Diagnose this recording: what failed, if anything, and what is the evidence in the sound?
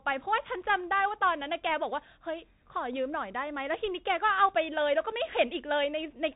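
The codec stage failed: the whole speech clip has passed through a Bluetooth CVSD headset codec. Nothing survives above about 3.8 kHz, and s sounds turn scratchy over a granular hiss as the one-bit delta step lags, which fits a 64 kbps stream. Plain filtering would leave that hiss absent.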